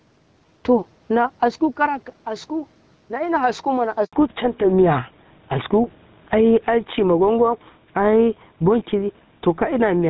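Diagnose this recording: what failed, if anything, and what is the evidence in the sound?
Gain pumping runs through the whole recording, at the capture and call-processing stage. The gain swings by around 10 dB. The likely cause is a microphone gain set far too high, so a fast limiter or compressor keeps clamping it. Steady room noise would hold its level.

A handover gap, a network-stage fault, sits at 4.05 to 4.13 s. The speech fades out within a few tens of milliseconds and is silent for about 80 ms before it resumes. During the switch between networks no speech frames arrived, so nothing could be decoded. Packet-loss concealment would fill a short hole with smeared, repeated sound. This is a clean silence, and it is followed at once by a change in bandwidth.

Fallback to narrowband, a codec-stage fault, starts at 4.13 s, right after the gap, and lasts to the end. Before that point the speech reaches well above 4 kHz. 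After it, nothing above 4 kHz remains, and the voice turns duller and rougher. That fits a switch from AMR-WB HD Voice to an older narrowband codec such as GSM full rate. A microphone or filter fault would dull the sound from the start, not switch over at the handover.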